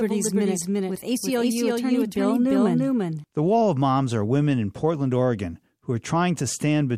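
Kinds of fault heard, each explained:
Doubled audio track: From the very start the speech is heard twice, a second full-band copy trailing about 300 ms behind the first and at roughly the same loudness. The repeat is dry and exact, with no fading tail or room colour, so it reads as a stutter rather than an echo. It stops abruptly at 3.24 s. The likely cause is a second capture of the same signal through a slower path being mixed in.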